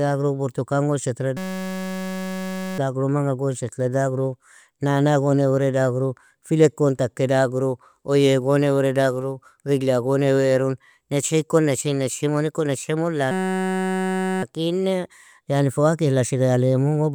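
Speech. A system hang loop buzzes at 1.37–2.78 s and 13.31–14.43 s. One 5.33 ms slice repeats at 188 Hz, which fits a frozen 256-sample buffer.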